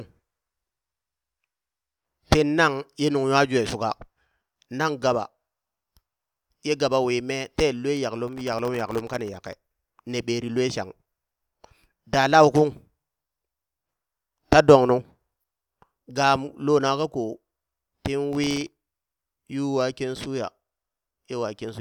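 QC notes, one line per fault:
8.28–9.57 s, processor overload crackle: dozens of very short buffers, under a millisecond each, miss their deadline in a row. Each is left as a hard-edged sliver of silence, giving a gritty tearing that clears just before "ne ɓeri lue shang".
18.33–18.87 s, processor overload crackle: a shorter run of the same missed deadlines. The silent gaps chop the sound into a brief crackle that stops when the load eases.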